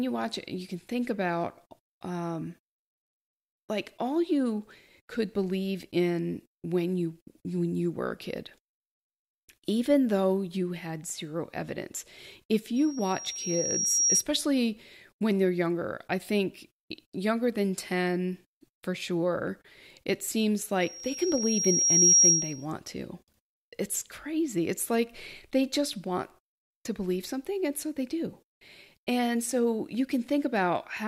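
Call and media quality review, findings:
Loudspeaker feedback squeal, speech, 12.76–14.24 s and 20.81–22.66 s. Single 5.6 kHz tone swelling over about a second and a half, peaking about 5 dB then about 10 dB above the speech. Mic-to-speaker acoustic loop; gain above unity at 5.6 kHz.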